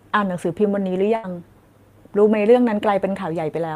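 From 1.15 to 1.25 s the last sound hangs and fades, then speech jumps ahead, skipping about 80 ms: a burst of packet loss.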